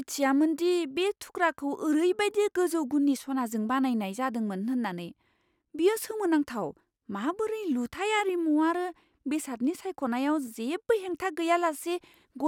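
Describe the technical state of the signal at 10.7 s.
At 10.7 s the speech signal is intact, with no audible fault at that moment.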